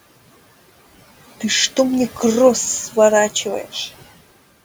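Across the whole speech recording the background pumps: in the pauses the room noise drops away by about 16 dB, then climbs back up underneath each phrase as talking resumes. These are noise suppressor artifacts. The suppressor estimates which frequency bands hold only steady noise and pulls them down frame by frame, so the gaps get cut hard while bands shared with speech stay open. The room noise itself, sitting about 19 dB under the speech, belongs to the recording.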